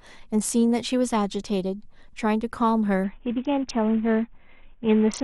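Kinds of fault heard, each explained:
Bluetooth SBC bit pool drop: from 3.04 s to the end the speech goes dull and gritty. The encoder, short of bits, starves the upper sub-bands and coarsely quantises the rest, which fits a bit pool cut from 28 to 5, around 54 kbps.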